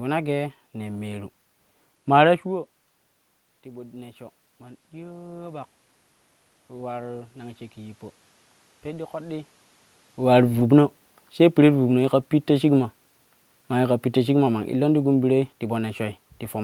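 Automatic gain rising runs from 3.63 to 9.55 s. Just before it, at about two and a half seconds, the talker moves away and the level at the microphone falls by about 16 dB. The gain control reads this as a quiet input and slowly adds about 8 dB over roughly six seconds. The voice and the room noise beneath it swell together, so the room noise comes up along with the speech instead of staying put.

Automatic gain falling follows from 10.19 to 15.46 s. Around 10 s the talker moves again, and the control finds the input too loud, or its background too strong, for the boosted gain. The control pulls back by about 4 dB over roughly five seconds. The speech sinks gradually, and the room noise drops with it. The level settles lower only after that slow recovery.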